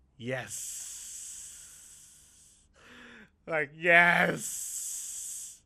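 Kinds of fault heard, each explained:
MP2 compression: the speech is dull with a plainly audible gurgly, grainy edge and nothing above 14.8 kHz. That's likely Layer II sub-band coding short of bits, dropping top bands and coarsely quantising the rest, which fits roughly 80 kbps.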